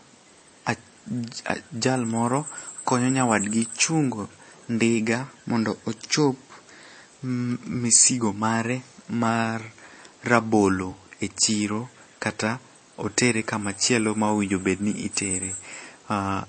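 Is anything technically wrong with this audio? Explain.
Yes. MP3 compression throughout: nothing is heard above about 8.4 kHz, and the speech sounds watery and swirly, with smeared attacks and metallic sibilants. This is likely a low bitrate near 32 kbps, forcing the encoder to cut treble and let weak frequency lines flicker between frames.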